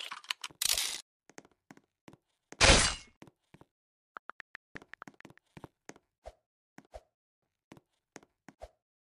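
Audio missing between chunks shows up as two abrupt skips, at 2.39 s and 5.19 s, where the sound jumps forward with no gap of silence. Each skip drops roughly a fifth of a second. The cause is likely a recorder working in 3-second chunks and losing audio at each handover. On a waveform or spectrogram, each join is a sudden discontinuity where the envelope and spectral patterns break off and resume mid-shape, 2.8 s apart.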